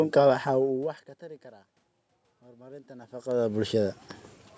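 From 2.41 to 3.82 s, the automatic gain rising fault appears. The input level falls by about 24 dB, and the gain control tries to compensate by gradually raising its gain by about 5 dB over that stretch. As a result, the voice and the room noise behind it swell together over roughly a second and a half. The talker also shifts position around 3 s, which changes the level at the microphone.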